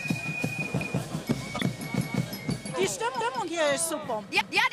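At 0.81 s the first overlapping-chunks fault appears. Each 1.0 s chunk starts before the previous one has finished, so a 200 ms stretch plays twice and produces a click or stutter at the join. On a waveform you can see a duplicated 200 ms segment with a discontinuity at its edge.

From 1.55 to 1.62 s a corrupt frame is decoded. Damaged bits in a few compressed frames push energy into the wrong frequency bands, and the result is a brief chirpy noise burst peaking around -15 dBFS. A spectrogram shows it as an isolated smear of misplaced energy.

The chunk overlap comes back at 2.01, 3.21 and 4.41 s, always repeating 200 ms. Spectrogram columns repeat at every join, and the joins are spaced 1.2 s apart.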